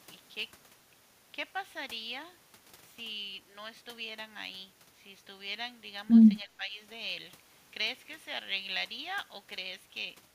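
Speech suppressed in double talk appears from 6.44 to 6.75 s, where the speech dips by a few decibels for about a third of a second. The likely cause is an echo canceller failing to separate the near-end speech from overlapping far-end echo and attenuating the near-end speech with it.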